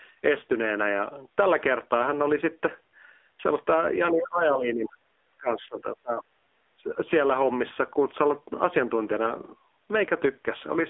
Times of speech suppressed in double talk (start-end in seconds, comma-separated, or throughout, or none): 4.11-4.96, 5.37-6.36, 6.76-6.89